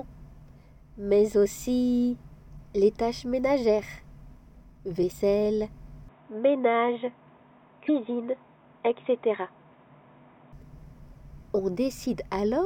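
At 2.55 to 2.59 s there is a short glitch. This is damaged data in a compressed stream. Some bytes in the coded frames were lost or overwritten. The decoder misread them, lost sync and hunted for the next valid frame header. The result is a blip of about 40 ms. The same fault returns at 5.08 to 5.13 s, and again at 7.85 to 7.90 s. Each is equally brief.

From 6.09 s to 10.53 s the sound turns dull and boxy. Nothing is heard above 3.8 kHz. The level also shifts by roughly 5 dB. The change is abrupt, with no gap at the switch. The likely cause is that the input switched to a poorer device, such as another microphone or a headset's call profile. Its narrower band and different tone take over. Its background noise sits far below the signal. At 10.53 s the fuller sound returns.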